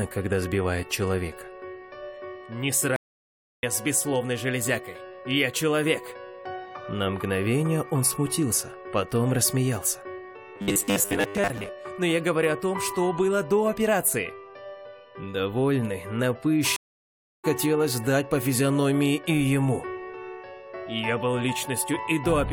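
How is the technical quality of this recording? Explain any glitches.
The recording has three audible glitches: two dropouts with jumps and one stretch of buzzy, mechanical sound.

Stream reconnects at 2.96–3.63 s and 16.76–17.45 s: these are silences of about 0.66 s and 0.68 s, each a flat gap in the waveform, after which the audio resumes about 0.7 s further on.

Robotic sound from repeated short buffers at 10.56–11.69 s: a rigid 100 Hz buzz, most likely from 10 ms fragments replayed while most of the audio is skipped, which shows as evenly spaced harmonic stripes on a spectrogram.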